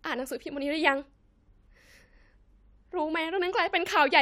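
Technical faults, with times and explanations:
No technical faults can be heard in this speech recording. There is nothing to time or explain.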